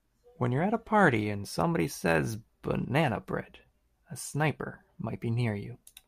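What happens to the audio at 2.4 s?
Nothing goes wrong at 2.4 s; the speech runs straight through that moment with no dropout, click, glitch or other fault.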